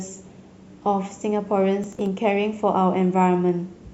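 Processor overload crackle from 1.84 to 2.07 s: around fifteen short buffers, which fits roughly 5 ms each, miss their deadlines and are skipped, leaving gritty tearing over the speech.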